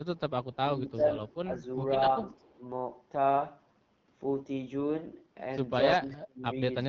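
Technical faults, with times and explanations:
Throughout, AMR wideband (HD Voice) codec: rough, raspy speech consistent with about 8.85 kbit/s coding; spectrogram shows smeared harmonics, noise-filled top band, nothing above 6.9 kHz.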